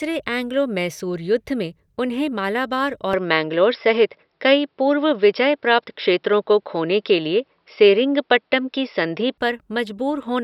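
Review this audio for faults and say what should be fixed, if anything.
The input was likely switched to a poorer device from 3.13 s to 9.38 s, with a narrower-band microphone taking over and no gap at the switch. The speech loses everything above 5.5 kHz, turns dull, shifts in level by about 5 dB and gains a faint new noise floor, then clears again at 9.38 s. Locking the input device for the whole recording, with automatic switching to headset call profiles disabled, would prevent this.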